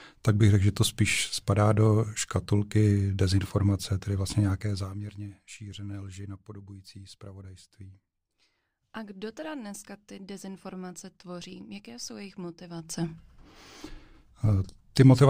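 No technical faults are audible anywhere in the speech.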